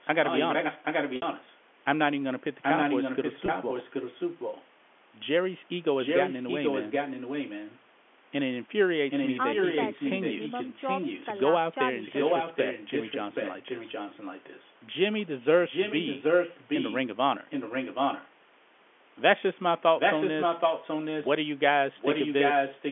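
An echo canceller on the far side, which likely plays the call through a loudspeaker, fails to remove its microphone's pickup, so an echo leak returns that voice about 0.78 s late, at times about as loud as the speech and at times somewhat quieter. It runs from 0.01 to 1.57 s. Within it, at 1.16 s, packet loss with pitch repetition bridges a 60 ms gap, which fits three lost 20 ms packets, by repeating the last pitch period and fading it into silence before the speech returns with a short cross-fade. The echo returns from 2.62 to 4.65 s, where a second loss, of 20 ms at 3.46 s, consistent with one packet, is bridged by repeating the last pitch period, which sounds like a slightly held, buzzy note. Further echo stretches follow at 5.99–7.85, 9.1–11.44, 11.99–14.72, 15.65–18.29 and 19.97–21.33 s, and the last runs from 21.95 s to the end, all at the same delay.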